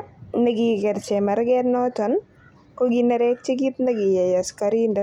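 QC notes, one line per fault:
No technical faults are present in the speech signal; level, continuity and timing hold steady across the whole recording.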